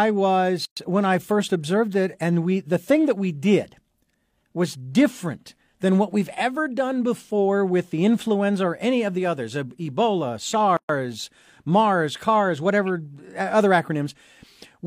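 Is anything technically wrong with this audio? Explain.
Yes. Twice in this speech the sound drops out completely and then picks up where it stopped, one of them just before "when I first observed". Each silence has smeared edges. The first runs 0.65 to 0.77 s (117 ms), the second 10.77 to 10.89 s (124 ms), ten seconds apart. This is a gap at a join of encoded pieces. Each piece was encoded on its own and joined untrimmed, so the encoder's start-up delay and last-frame padding remain as silence.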